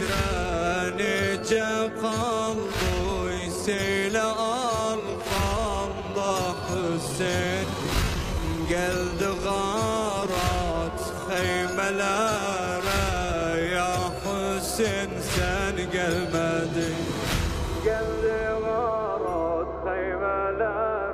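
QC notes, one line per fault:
0.00–14.78 s, time-stretched section: software likely slowed this part to 0.74 times its original speed while holding pitch, repeating short pieces to fill the extra length, so the audio drags until the pace abruptly returns at 14.78 s.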